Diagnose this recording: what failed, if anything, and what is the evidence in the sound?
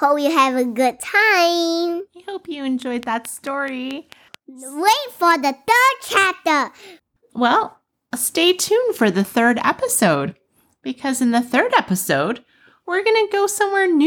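A train of clicks runs from 2.82 to 4.35 s, just after "hope you": about seven near-identical pulses at a regular 4.6 per second, peaking a few dB above the speech. The likely cause is interference pickup in the analogue wiring or a faltering interface.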